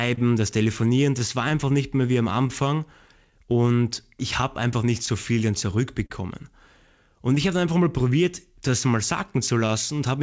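Clock drift between sender and receiver runs through the whole speech clip. The sender's clock is about 3 percent slow, so the receiver's jitter buffer keeps draining and must pad the stream. This leaves small timing hiccups at uneven intervals rather than one obvious break.

Scattered short gaps appear from 0.14 to 6.11 s: around ten lost or late packets, each patched by extending the last sound. Together they make up roughly 200 ms, the longest near 40 ms, heard as brief smears or ticks within G.722 speech that is band-limited below 8 kHz.

Repeated timing corrections run from 1.65 to 10.2 s. The receiver plays at 99 percent speed, stretching short pieces to stay in step with the slow sender, and adds about 70 ms in total. The stretches are small and unevenly spaced.

Scattered short gaps return from 7.35 to 9.98 s. About seven small losses are concealed by continuing the preceding sound, around 70 ms altogether, none longer than about 20 ms. 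They are lighter than the earlier cluster.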